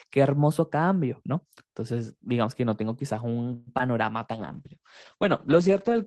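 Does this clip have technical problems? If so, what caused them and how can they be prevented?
Yes. From 3.53 to 3.74 s there is a call audio freeze: the last sound is stretched into a fading fill for about 134 ms. The likely cause is delayed packets draining the jitter buffer, after which the audio resumes where it paused and runs 134 ms later. A larger adaptive jitter buffer and a more stable network path prevent this.

At 3.78 to 3.81 s, short concealed packet loss leaves about 20 ms undecoded. Concealment bridges it with synthesized continuation, heard as a brief smear. In-band FEC or redundancy would recover such losses.

From 4.35 s to the end, a call bitrate drop takes the encoder from 32 to 10 kbps and narrows bandwidth from 20 kHz to 8 kHz, leaving the sound coarse and muffled. Better bandwidth estimation and congestion control would keep the rate higher.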